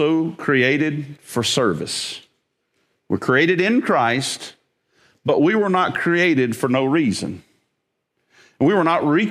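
No technical faults are audible.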